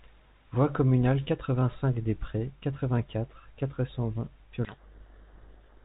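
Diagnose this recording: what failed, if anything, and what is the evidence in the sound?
A codec payload misread at the codec stage runs from 4.65 s to the end, burying the speech in harsh distortion. The decoder unpacks each G.726 code word in the wrong bit order, so the decoded differences are wrong and the adaptive predictor is thrown off course.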